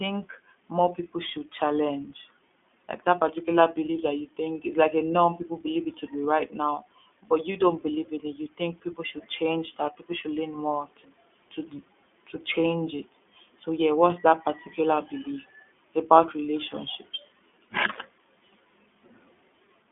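iLBC codec coding runs through the whole speech clip. Each short frame of the excitation is coded on its own, which fits 20 ms frames at the 15.2 kbps mode. The band is held to a telephone line of roughly 200 Hz to 3.5 kHz, with nothing above 3.7 kHz, so sibilants and brightness are gone. The damage is plainly audible: a rough, slightly synthetic texture sits on every stretch of speech.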